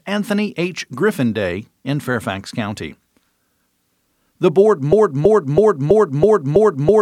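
From 4.93 s to the end, this speech gets stuck in a broken-record loop: a 0.33 s fragment repeats six times back to back, likely from a stalled stream.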